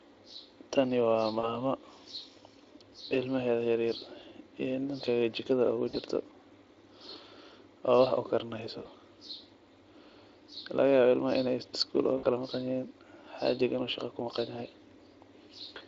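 Brief buzzy smears, where the speech stretches into a tone and fades, occur at 1.39–1.61 s, 5.89–5.96 s, 8.83–8.87 s just after "wax u karineyso", and 12.17–12.26 s. This is VoIP packet loss concealed by the speech codec. About 40, 40, 20 and 60 ms of audio went missing, and the decoder filled each gap by extrapolating from its last pitch and filter and lowering the gain. The first gap leaves a weakened tail that runs on after packets return. The Speex coding underneath sounds lightly processed.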